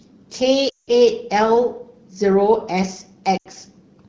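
Lost AMR speech frames break up the speech from 0.69 to 0.90 s and from 3.37 to 3.47 s. The decoder filled each gap (about 180 ms, then 80 ms) by repeating the last good pitch and vocal tract settings at falling gain. The sound smears and fades rather than cutting to abrupt silence.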